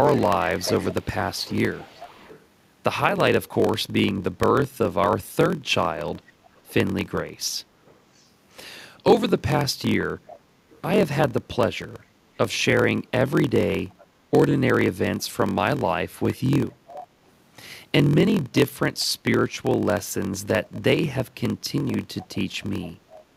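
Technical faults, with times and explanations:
throughout, block size mismatch (padded): A steady 43.1 Hz buzz comes from zero gaps filling each block, which fits a 1024-sample read. The sound runs 0.938 times normal speed with unchanged timbre.
0.03–2.45, 6.15–6.73, 7.85–8.27, 10.27–10.82, 12.02–14.06, 16.32–17.08, 19.00–19.56, 22.18–23.37 s, echo leak: A copy of the speech returns 404 ms late. It ranges from faint to fairly clear. It is likely from incomplete echo cancellation on a loudspeaker.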